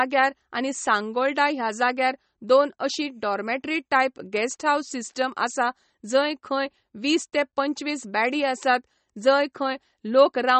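MP3 compression throughout: nothing sounds above 8.3 kHz, and the speech is plainly watery and swirly, likely from an encoder short of bits, consistent with 32 kbps.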